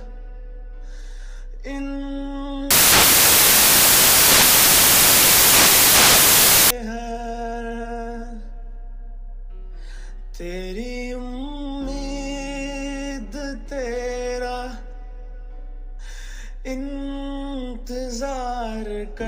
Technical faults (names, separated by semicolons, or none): samples built from the wrong bytes